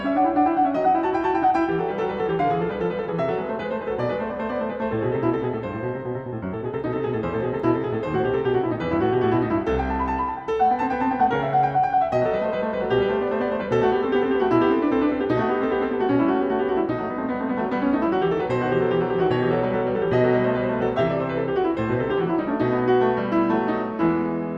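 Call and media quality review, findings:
No audible faults found.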